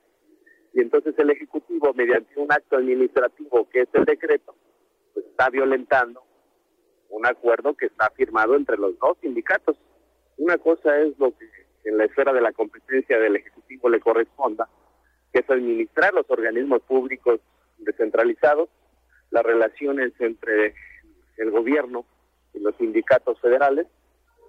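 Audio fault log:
2.14–2.16 s, lost LE Audio frames: about 15 ms dropped, consistent with two 7.5 ms LC3 frames, concealed by a brief noisy smear.
3.98–4.05 s, lost LE Audio frames: 45 ms lost in bursts over 60 ms, the longest run about 30 ms. Reused spectrum with random signs smears, then fades.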